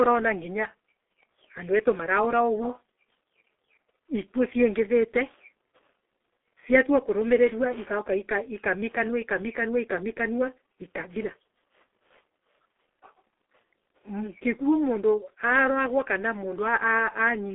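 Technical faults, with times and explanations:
Throughout: G.723.1 codec. The speech is muffled and hoarse, with consonants smeared together. The codec works in 30 ms frames and refreshes its model of the voice slowly, at a rate that fits roughly 6.3 kbit/s, so fast detail is lost. On a spectrogram, energy sits in a band of about 300 Hz to 3.5 kHz and nothing appears above 3.8 kHz. Fricatives show as dull, blocky patches instead of crisp high-frequency streaks.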